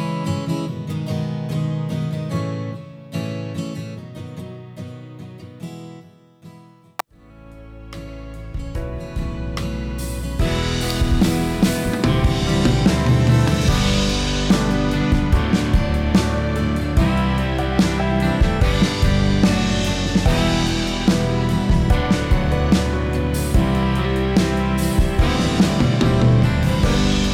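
At 7.00 s there is an electrical switching spike. It is a sharp snap, peaking at about -5 dBFS. The likely cause is a nearby switch, motor or static discharge arcing briefly, with the audio line picking up that burst.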